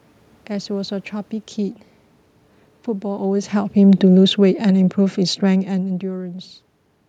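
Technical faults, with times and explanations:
3.05–6.04 s, automatic gain falling: the AGC judged the input too loud or its background noise too strong and eased gain down about 8 dB, so speech and room noise sink together.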